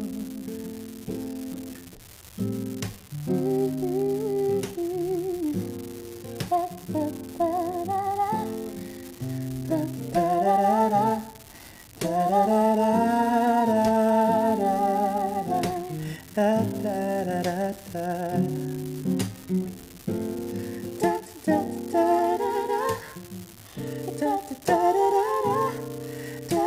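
An unreliable data bit on one marginal data line flips at random across the whole clip, so each wrong sample jumps by a fixed step of about -26 dBFS. The result is a steady crackling fizz that stays equally present through the quiet gaps in the audio.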